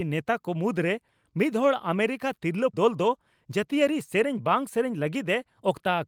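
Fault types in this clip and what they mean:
skip ahead: About 0.4 s of audio was discarded while later audio waited, so at 2.73 s the speech jumps forward with no gap, its two sides joined directly.
jitter buffer speed-up: An overfull jitter buffer trimmed pitch-period slices totalling about 50 ms, so from 3.45 to 4.26 s speech runs at 106% speed, slightly hurried but unchanged in pitch.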